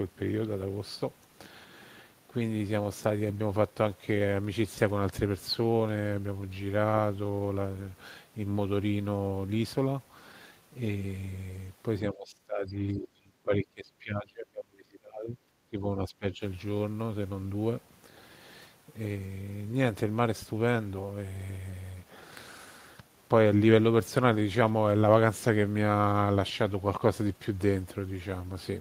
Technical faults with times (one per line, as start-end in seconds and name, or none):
12.10-15.39 speech suppressed in double talk
15.70-16.42 speech suppressed in double talk